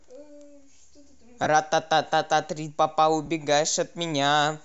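At 1.44 to 1.46 s the speech briefly turns into a hissy smear for about 22.5 ms, and again at 3.26 to 3.28 s for about 15 ms. These are lost LE Audio frames, which points to three and then two missing 7.5 ms LC3 frames. The decoder filled each gap by reusing the last spectrum with scrambled signs. Unlike a plain dropout, the gaps never fall silent. They carry a short burst of noisy, pitchless texture.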